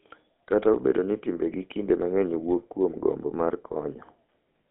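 Throughout, GSM full-rate codec damage: a pulse-driven vocal-tract model gives buzzy, gravelly speech, band-limited to about 200 Hz–3.6 kHz, consistent with a 13 kbps rate.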